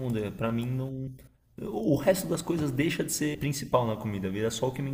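Speech with compressed frames skipped at 1.07 s and 3.34 s. The audio jumps ahead by roughly 100 ms and then 150 ms, which fits a few 32 ms codec frames lost or rejected by the decoder.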